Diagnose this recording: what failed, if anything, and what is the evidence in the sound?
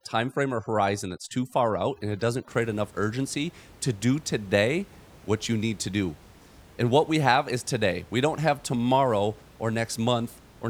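Overdone noise removal in the call processing stage affects the opening, from 0.0 to 2.48 s. It ends just before "create enough urgency to". In that stretch the background drops and breaks up into twinkling specks. The suppressor was set too hard. Any frequency band close to its noise estimate was pushed far down or cut. Quiet parts of the speech were removed along with the room noise, which otherwise sits about 26 dB below the speech.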